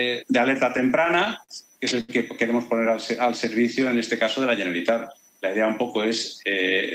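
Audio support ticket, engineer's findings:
Repeated stalls (stutter), 0.77–1.51 s: six gaps, longest 47 ms, about 93 ms concealed, nothing lost. Jitter buffer repeatedly drained by late packets. Unlike a single stall, it recurs across the span.

Short stall from a late packet, 2.01–2.11 s: one sound held about 80 ms, then resumes at the same point. The jitter buffer ran empty and playout delay rose 80 ms. It is a single isolated hold, not a stutter.

Jitter buffer slow-down, 2.75–3.80 s: audio drawn out to 94% speed, 67 ms added, pitch unchanged. Receiver repeated pitch periods to build up its reserve. It is a gradual stretch rather than an abrupt held sound.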